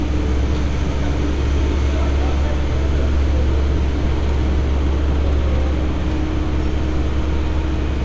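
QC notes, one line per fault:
No faults found in this recording of sounds. Nothing here needs a time or a fix.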